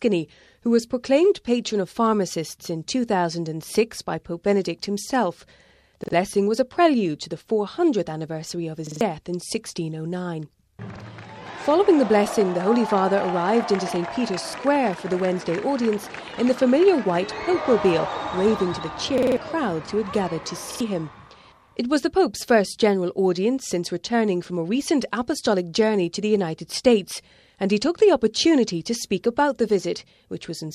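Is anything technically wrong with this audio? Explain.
Yes, there's a repeated buffer fault that hits six times: 6.04–6.13, 8.87–9.01, 10.96–11.01, 14.49–14.54, 19.18–19.37 and 20.71–20.81 s. Each time the next chunk of audio showed up late, so playback looped the last 46 ms piece, which fits a 2048-sample buffer, between one and four extra times. You hear a stuttering repeat with hard joins, longest around 19.2 s, and a small stretch of sound skipped each time.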